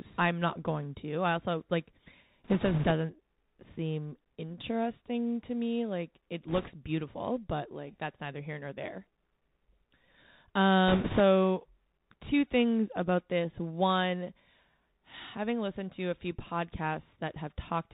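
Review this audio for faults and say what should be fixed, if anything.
The whole recording passes through a Bluetooth CVSD headset codec, and the damage is plainly audible. CVSD codes each sample as a single up-or-down step whose size adapts, so nothing above 4 kHz survives, fast loud high sounds outrun the step and smear, s sounds come out scratchy, and a fine granular hiss sits under the speech. Unlike ordinary band-limiting, which only sounds muffled, this adds grit as well as dullness. To prevent it, record on a wideband path or a wired microphone instead of the headset profile.

Bit errors on a Bluetooth voice link show up three times: from 2.44 to 2.92 s, right after "to I also like"; from 6.48 to 6.71 s, just before "beautiful but like that's"; and from 10.88 to 11.21 s. At each point the speech gains a rushing, crackly noise. The third burst is the roughest, at an error rate of around 5 percent, against roughly 3 percent for the first two. 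Because every CVSD bit carries the same small weight and its error fades within a few steps, the corruption stays a smeared crackle. Packet loss would instead give hard clicks or gaps. To prevent it, keep the headset close to the receiver and away from 2.4 GHz interference.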